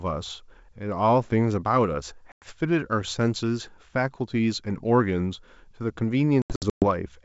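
Speech over a G.722 wideband call. Packet loss on an ADPCM call cuts hard silent holes at 2.32–2.46 s and 6.42–6.85 s. Each return is slightly distorted until the decoder's predictor resynchronises.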